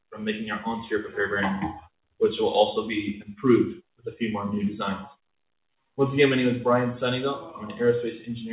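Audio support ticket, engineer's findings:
No faults found; the audio passes through the call path with nothing above 4 kHz, consistent with a narrowband codec such as G.711 A-law.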